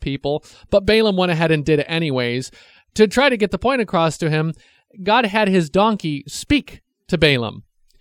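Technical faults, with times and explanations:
Listening through the speech, nothing stood out as a technical problem at any point.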